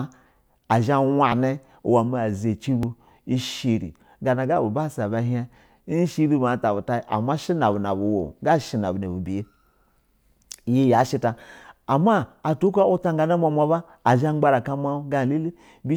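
At 1.32 s and again at 2.83 s the speech jumps forward, with no gap of silence between the two sides of the join. The first skip loses roughly 10 ms of sound, the second roughly 20 ms. This is likely a dropped buffer (overrun): the recording software failed to read its input in time, the hardware overwrote that block, and the surviving audio was spliced together directly.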